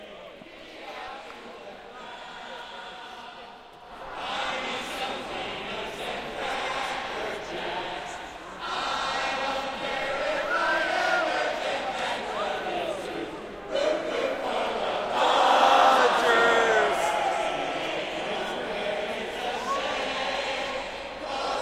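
At 1.08 s there is a DC step. The waveform's zero line suddenly shifts, as if a converter recalibrated or an offset input was switched in. The jump is small, about -42 dBFS. It is heard as a low thump. The offset then fades away, because a 20 Hz high-pass filter pulls the baseline back to zero. The sounds in the clip carry on unchanged through the step.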